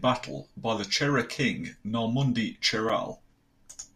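At 2.89 s the speech has a block of digital silence lasting 5 ms. The samples drop straight to silence and back with no fade, so it is heard as a brief tick or dip rather than as silence.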